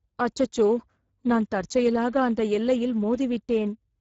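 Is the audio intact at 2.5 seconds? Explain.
No. At 2.5 seconds, as across the whole clip, the speech runs through the Speex codec at a low quality setting, which fits a bitrate near 10 kbps. With so few bits for the excitation signal, the codec can only approximate each sound, so the speech comes out plainly damaged: noisy and hoarse. Nothing is present above 7.7 kHz, and the top band that remains sounds like shaped noise.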